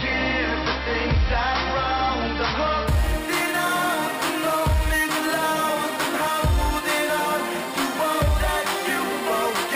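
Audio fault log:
2.88–9.76 s: imaging from sample-and-hold upsampling. A bright metallic fizz rides on the music and follows its level. Each sample was simply repeated with no smoothing. Mirrored copies fill 6 kHz to 12 kHz, about 15 dB down, which fits a 12 kHz source rate.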